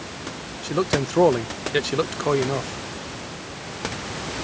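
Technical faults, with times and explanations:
No technical faults can be heard in this speech clip. The call microphone processing leaves nothing above 8 kHz, and the room noise sits about 14 dB below the speech.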